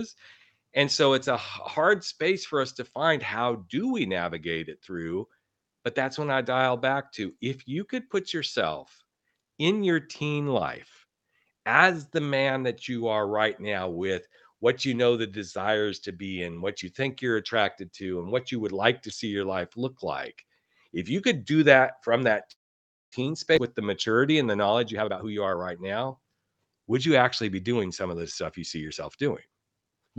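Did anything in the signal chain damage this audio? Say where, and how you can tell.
Yes. At the network and jitter-buffer stage, from 22.51 to 23.14 s, the audio halts and a decaying tail stretches into roughly 0.57 s of silence before resuming exactly where it stopped. This is a call audio freeze, likely from delayed packets draining the buffer, adding a 0.6 s gap.

Shortly after, at 23.56 to 23.59 s, playback jumps abruptly forward with almost no gap. This skip ahead drops about a fifth of a second of audio. A stretch was dropped while newer packets were already queued, splicing both sides nearly directly.

From 24.93 to 26.63 s the speech runs hurried, at 124% speed, with unchanged pitch. This is jitter buffer speed-up: to shed excess buffered delay, the receiver repeatedly cut pitch-period-sized pieces, removing around 0.4 s, over the Opus path's 8 kHz band.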